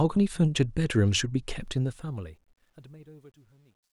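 From about 1.6 s to the end, the fade-out that begins around 1.6 s carries truncation distortion on a fade. The gain stage drops low-order bits without dither, with a coarseness that fits roughly an 11-bit word. As the level sinks, the speech turns gritty, and from 2.75 s the grit is at its worst. On a waveform the tail shows stair-stepped, squared blocks. A spectrogram shows broadband harmonic hash rather than a clean decay.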